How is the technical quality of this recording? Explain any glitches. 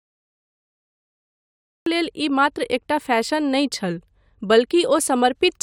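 The recording has one clear technical fault: a cut-off start.

From 0 to 1.86 s there is only digital silence, and at 1.86 s the speech begins abruptly, already mid-sound, just before "लेल ई". Capture or streaming evidently began late, so the onset was lost and the audio jumps from nothing straight into the sound with no natural attack or fade. On a waveform this shows as a flat line followed by a sudden vertical wall of signal. A spectrogram shows a hard vertical edge at 1.86 s, with energy appearing across all frequencies at once.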